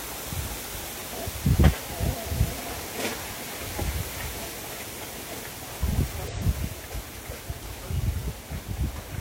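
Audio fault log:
0.79–0.84 s, 3.95–4.00 s, 6.27–6.33 s, 8.55–8.59 s: damaged data in a compressed stream. Each 40–54 ms burst is a brief glitch where the decoder misreads corrupted frames, loses sync and hunts for the next valid frame header before the sound resumes.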